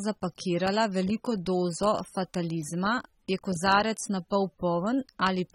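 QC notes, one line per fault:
Throughout: AAC compression, plainly audible across the speech. Nothing sounds above 16.6 kHz, and the remaining band sounds dull and smeared, with warbling on sibilants. This is likely from AAC-LC quantising coarsely against its hearing model, which fits a bitrate near 27 kbps.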